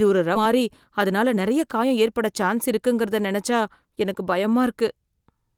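Skip ahead at 0.35 to 0.37 s in this speech clip: about 0.7 s of audio was dropped while later audio waited, so playback jumps forward with no filler. Jitter buffer speed-up from 0.45 to 2.08 s, ending just before "சான்ஸ் இருக்குங்கிறத நினச்சா": a backlog was trimmed by removing short pitch-period pieces, cutting roughly a tenth of a second, so speech runs about 7% fast at unchanged pitch.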